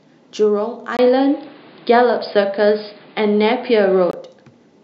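At 0.97 s there's a 20 ms gap, then the speech turns dull and boxy with nothing above 5 kHz, a few dB level shift and a new noise floor well below it, likely an input switched to a poorer device. It clears at 4.13 s.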